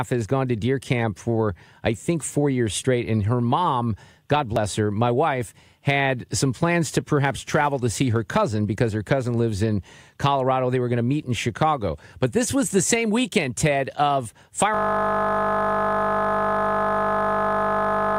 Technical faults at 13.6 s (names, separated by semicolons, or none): none